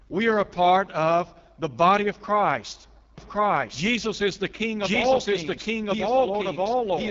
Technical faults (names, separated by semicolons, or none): AMR wideband (HD Voice) codec; doubled audio track